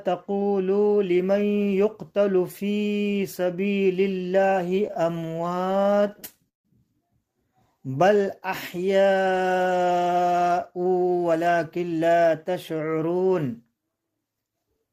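From 4.69 to 6.66 s the audio suffers repeated stalls (stutter). Packets reached the receiver late or too slowly, so its jitter buffer kept running dry. Each time, it stretched the last sound to cover the wait. This happens many times across the span. The longest hold lasts 160 ms and fades as it goes. Together the fills come to 462 ms, about a quarter of the span. Nothing is lost, but the sound catches and drags.

From 7.48 to 8.98 s comes a jitter buffer slow-down. The buffer was short of reserve, so the receiver repeated single pitch periods and small slices of pauses, over and over. This adds 116 ms. Playback runs at 93% of normal speed, yet the pitch holds steady. Sounds are drawn out.

From 10.85 to 13.05 s there is a jitter buffer speed-up. The buffer now held more audio than it wanted, so the receiver cut out short pieces of one or a few pitch periods in quick succession. Roughly 150 ms disappears. 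Playback runs at 107% of normal speed with unchanged pitch. The result sounds rushed.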